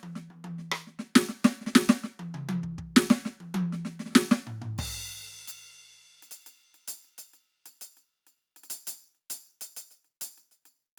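No technical faults are audible.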